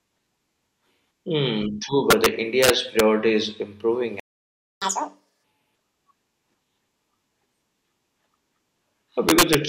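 Between 2.10 and 2.26 s, from 2.63 to 3.00 s just before "is improving", and again from 9.29 to 9.55 s, integer overflow cracks through the speech. Peaks pushed about 3 to 4 dB past the integer limit wrap to the opposite sign instead of being held, giving harsh snaps far sharper than clipping. On the waveform, the tops jump across the full range to the other rail, and the spectrogram shows bright full-height vertical streaks.

At 4.20 s, right after "is improving", a playback stall cuts the sound dead for 0.62 s, likely because the player ran out of buffered data. The waveform is flat at zero, and the spectrogram is an empty blank band before the sound resumes.

From 4.82 to 5.44 s comes catch-up at higher speed. The backlog is resampled at 2.0x to regain the lost time, so the speech runs twice as fast and jumps up by close to ten semitones before dropping back to normal. The spectrogram shows harmonics stretched upward and squeezed in time.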